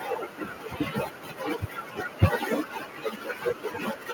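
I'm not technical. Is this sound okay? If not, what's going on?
No. There is microphone overload from 2.22 to 2.25 seconds, where the loudest bit of speech briefly turns harsh and crackly. The likely cause is that the microphone level was set too high, so the tops of the strongest sound waves got chopped off flat.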